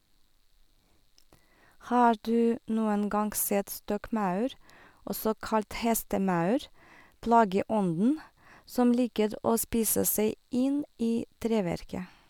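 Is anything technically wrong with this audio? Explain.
No, the speech signal holds steady throughout, with nothing technically wrong to be heard in it.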